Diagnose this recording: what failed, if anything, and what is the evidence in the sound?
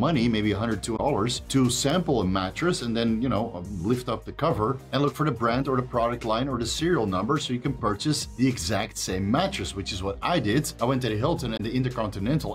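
Brief glitches at 0.96–1.00 s and 11.53–11.60 s reveal damaged data in a compressed stream: corrupted codec frames are misread, and the decoder loses sync until the next header.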